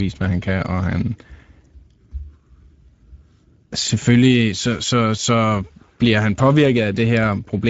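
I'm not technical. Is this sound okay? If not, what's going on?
No. The whole clip has Speex codec damage: the speech sounds hoarse and grainy, not merely dull like simple muffling, and nothing remains above 7.7 kHz.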